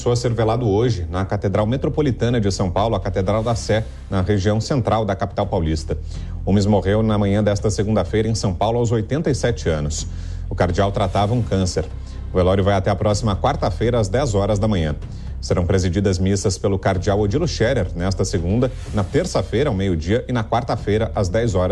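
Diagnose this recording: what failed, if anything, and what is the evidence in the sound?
Nothing failed: no stage from the analogue wiring through to playback leaves any audible evidence of a fault in this recording.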